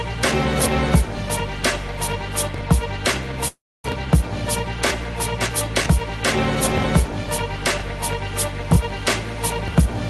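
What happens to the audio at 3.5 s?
A call audio freeze runs from 3.48 to 3.86 s. The sound just before it stretches into a short buzzy or hissy smear that fades out, followed by roughly 0.27 s of silence. The audio then picks up exactly where it stopped, with nothing skipped, so everything afterwards arrives about 0.36 s late. This is likely packets stalling in transit, draining the jitter buffer while the receiver filled the wait with concealment.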